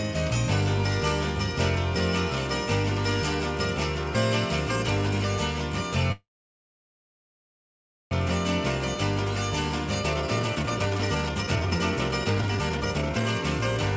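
A call audio freeze runs from 6.12 to 8.13 s: the last sound hangs briefly, then about 1.9 s of silence, likely from delayed packets draining the jitter buffer. A jitter buffer speed-up follows from 10.01 to 13.42 s, with repeated pitch-period cuts removing roughly one and a half seconds, making the sound play at 149% speed with unchanged pitch.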